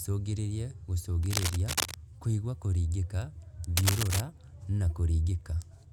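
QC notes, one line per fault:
1.23–1.96 s and 3.77–4.22 s, cable scratch noise: two bursts of rough scratchy rustle, the first just before "kũigua kũringĩka" and a bit under the speech, the second right after "kũigua kũringĩka" and about as loud as it. Likely a worn cable or connector being moved.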